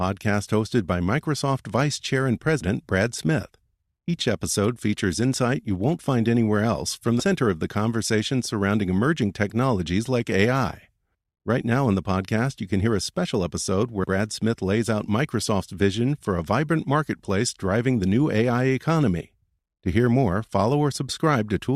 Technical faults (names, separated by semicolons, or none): compressed frames skipped